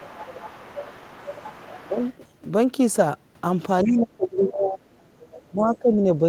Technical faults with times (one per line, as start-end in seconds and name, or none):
0.00-2.17 other side's voice leaking through
1.83-1.95 speech suppressed in double talk
3.85-4.82 speech suppressed in double talk
3.87-3.92 other side's voice leaking through
5.19-5.43 other side's voice leaking through
5.49-6.28 speech suppressed in double talk